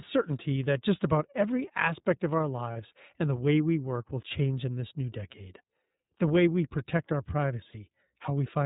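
Speech coded with the iLBC codec throughout, and the codec damage is plainly audible. Nothing above 4 kHz survives, so the voice is narrowband and has a rough, slightly synthetic grain. The sound fits the 13.33 kbps mode with 30 ms frames. On a spectrogram, energy stops at a hard ceiling at 4 kHz, and the harmonics below look smeared and less cleanly striated than in wideband speech. There are also lost iLBC frames at 2.73 to 2.76 s and at 7.70 to 7.75 s. Each gap lasts about 30 ms, which fits a single dropped frame. In each gap the decoder fills in by repeating the last pitch cycle blended with noise, so you hear a brief held, faintly buzzy vowel. Because each iLBC frame decodes independently, the voice returns cleanly straight afterwards. On a waveform, each gap shows as a short stretch of near-identical repeating periods. On a spectrogram, it appears as flat, unchanging harmonic bands with a noisy haze, sharply bounded on both sides.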